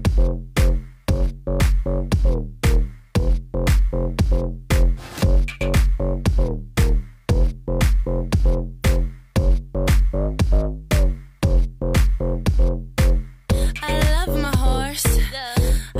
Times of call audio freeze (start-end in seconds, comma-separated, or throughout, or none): none